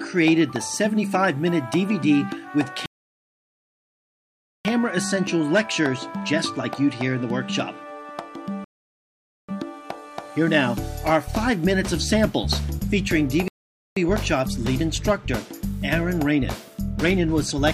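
The audio halts three times in rebuffering stalls: 2.86–4.65 s (about 1.79 s of silence), 8.64–9.49 s (about 0.84 s) and 13.48–13.97 s (about 0.49 s). Each time the player's download ran dry and it waited for more data. Unlike a dropout or packet loss, which skip material, the sound here resumes exactly where it stopped, so nothing is missing and only time is added.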